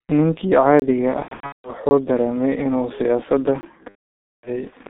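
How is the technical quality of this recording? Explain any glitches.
The recording has heavy technical damage: a constant muffled, band-limited quality, three short dropouts to dead silence, and two stretches where the sound turns buzzy and fades.

Throughout, the sound is dull and hoarse, with smeared consonants and nothing above about 3.6 kHz or below about 150 Hz. This is the G.723.1 codec at about 6.3 kbit/s. Its slow-updating voice model and narrow telephone band strip the detail away.

At 0.80–0.82 s, 1.89–1.91 s and 3.61–3.63 s there is a brief hole. These are blocks of digital silence. About 20 to 25 ms of the sound cuts out abruptly with no fade, which points to output buffers not being filled in time.

From 1.22 to 1.70 s and again from 3.89 to 4.63 s, the sound smears into a buzzy, fading drone. This is VoIP packet loss concealed by the speech codec. The first stretch loses about 360 ms scattered over 420 ms, with a longest run of 180 ms. 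The second loses about 540 ms. The decoder repeats its last pitch and filter at decreasing gain, so the audio stays weak even after packets return.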